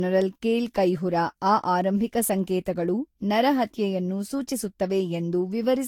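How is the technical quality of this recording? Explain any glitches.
The speech has audible coding damage that lasts the whole clip. Generation loss runs from start to finish and is likely caused by repeated lossy encoding, around seven passes. The character points to Vorbis at roughly 70 kbit/s. Each decode and re-encode quantised the signal again on a shifted frame grid, so the errors piled up. The result sounds swirly, smeared and hollow, with softened consonant attacks, and nothing is left above 18.5 kHz.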